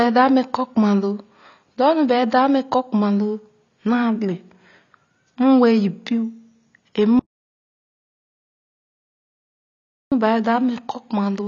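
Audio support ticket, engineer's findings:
AAC compression throughout. Dull, smeared speech with warbling on sustained sounds and fizzy sibilants. Nothing above about 7.1 kHz. Likely cause: AAC-LC encoder starved of bits, which fits a bitrate near 24 kbps. Band-limiting and coarse quantisation audible everywhere.

Audio dropout to silence, 7.19 s to 10.12 s. Speech cuts off abruptly, then returns mid-flow. Gap is silent, with no room tone, so about 2.9 s of content is lost. Likely cause: input link or capture device lost while recording continued.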